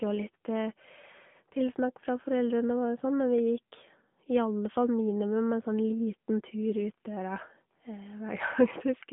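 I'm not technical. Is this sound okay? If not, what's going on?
No. The speech runs through an AMR narrowband mobile codec, the compression used for phone calls, for the whole clip. Only sound between about 150 Hz and 3.5 kHz gets through, so it sounds thin and muffled. The compression damage is plainly audible, giving a buzzy, synthetic edge.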